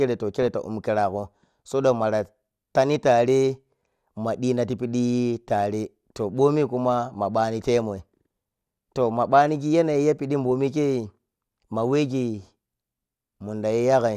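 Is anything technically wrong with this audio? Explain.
Yes, there are two faults in this speech clip.

At 2.76 s there is a brief click where a tiny slice of sound plays twice with a hard join. This is a repeated buffer: fresh audio arrived late, so the device replayed its last block, about 1.5 ms long. That fits a 64-sample buffer, and roughly 1.5 ms of real audio was lost.

At 12.11 s short blips of noise pass over the speech in individual frequency bands. This is DAB burbling. Weak reception let bit errors, at a rate of a small fraction of a percent, slip past error correction and corrupt the MP2 audio data across four frames.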